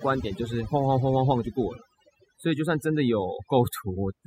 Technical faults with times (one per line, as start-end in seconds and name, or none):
0.00-4.26 overdone noise removal